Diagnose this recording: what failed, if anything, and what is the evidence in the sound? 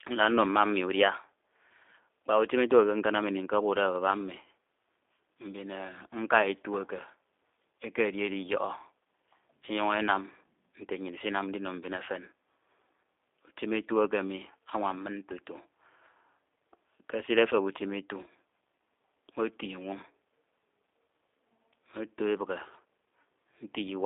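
Codec stage: G.729 coding throughout. Nothing passes above 3.7 kHz. Speech sounds rough and synthetic, rebuilt from a vocal tract model and sparse pulses.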